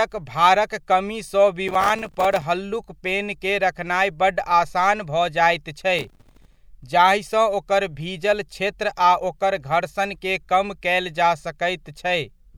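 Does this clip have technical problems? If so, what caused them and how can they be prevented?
Yes. Two bursts of gritty crackle tear through the speech, from 1.68 to 2.42 s just after "भारक कमी सँ" and from 5.99 to 6.61 s just after "जाइत छै". This is processor overload crackle: the processor repeatedly missed its deadlines for very short audio buffers, and each miss dropped a tiny hard-edged gap of silence into the signal. The spacing of the clicks fits buffers of around 3 ms, with dozens missed in each burst. To prevent it, reduce processing load or use a larger buffer during recording.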